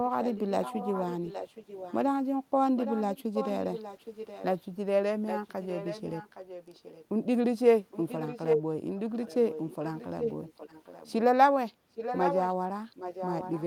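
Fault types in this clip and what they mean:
Echo leak: a delayed copy of the speech trails it by 0.82 s in repeated stretches across the clip, mostly well below the voice but at one point nearly as loud. The likely cause is a far-end loudspeaker whose echo canceller let its microphone pickup through.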